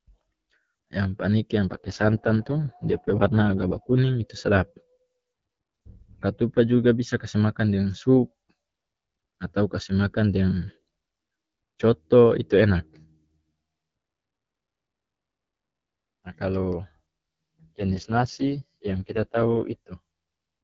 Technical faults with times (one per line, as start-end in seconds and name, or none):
1.70-3.98 AMR rate drop
17.61-19.62 AMR rate drop